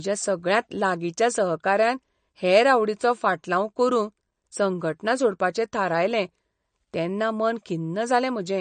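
A speech recording that has likely been squeezed through MP3 compression at a low bitrate, around 40 kbps by the sound of it, throughout its length. Short of bits, the encoder has removed the treble entirely above 9 kHz and has kept dropping weak frequency lines in and out from frame to frame. The result is plainly audible codec damage: a dull top end, a watery, swirling texture, chirpy metallic sibilants and smeared attacks.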